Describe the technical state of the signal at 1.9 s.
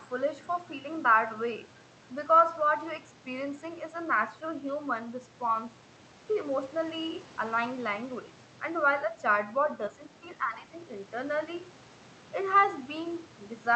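At 1.9 s the speech is intact, with no dropout, glitch or other fault, only the normal sound of the call path, whose band limit tops out at about 8 kHz.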